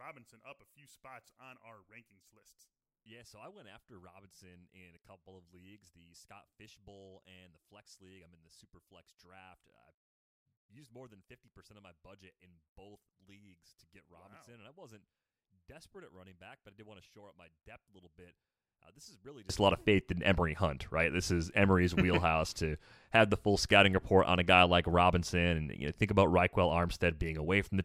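From 0.0 to 19.5 s, the speech sits about 29 dB low. The likely cause is one channel inverted, cancelling in mono until "a lot of faith".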